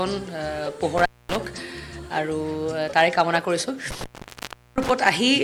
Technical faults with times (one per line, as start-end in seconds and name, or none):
0.98-1.36 intermittent contact
3.91-4.90 intermittent contact